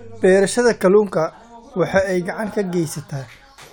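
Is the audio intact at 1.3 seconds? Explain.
Yes, at 1.3 seconds the speech plays through intact, with no dropout, click, distortion or other audible fault at that moment.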